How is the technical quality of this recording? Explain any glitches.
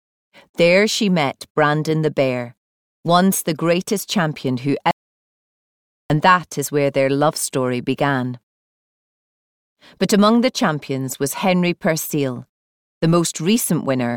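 The recording has one clear glitch: an audio dropout to silence from 4.91 s to 6.1 s, where about 1.19 s of sound is lost. The signal cuts off abruptly and then resumes mid-flow. The gap is silent with no room tone, which sets it apart from a natural pause or a fade. The input was likely lost briefly, through a disconnected device, a failed link or an accidental mute, while recording carried on.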